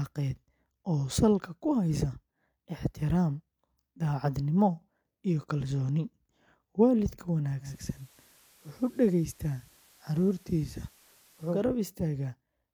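Digital radio blending to analogue, 7.60 to 11.65 s, in speech: the receiver lost the digital stream and cross-faded over 191 ms to the station's FM signal, adding hiss around 30 dB down and dropping level about 1 dB, then returning.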